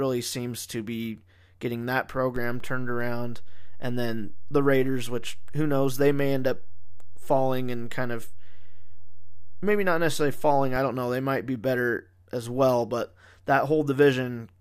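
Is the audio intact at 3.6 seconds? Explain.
No. At 3.6 s the clip sits inside a DC step that runs from 2.36 s to 10.76 s. The waveform's zero line jumps by about -26 dBFS at 2.36 s, as if an offset were switched into the input, and holds there until it drops back at 10.76 s. Each edge is a low thump while the speech carries on unchanged. On a waveform the trace rides visibly off centre; a spectrogram shows low-frequency smears at both edges.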